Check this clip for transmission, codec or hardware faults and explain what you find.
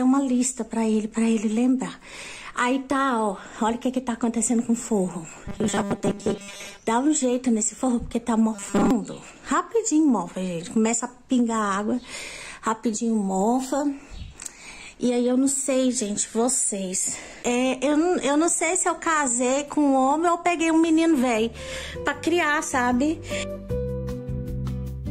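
Two faults of one kind: robotic sound from repeated short buffers at 5.46–6.79 s and 8.55–8.91 s. A rigid 200 Hz metallic buzz replaces most of the audio, likely from repeated 5 ms buffers.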